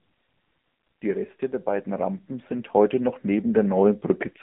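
AMR narrowband mobile codec damage runs through the whole of this speech clip, from start to finish. The sound is squeezed into a telephone band of roughly 150 Hz to 3.4 kHz, with nothing above 3.5 kHz. The codec models the vocal tract and drives it with a few pulses per 5 ms subframe. Here the buzzy, synthetic edge is plainly audible, which fits a low mode of around 7.4 kbps.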